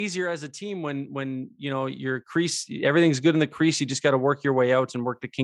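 From 0.58 s, just after "as a", automatic gain rising lifts the level by about 11 dB until 3.06 s, before "good in the crease". The control judged the speech too quiet and raised its gain slowly, so voice and background noise swell together, unlike compressor pumping, which reacts to each loud syllable.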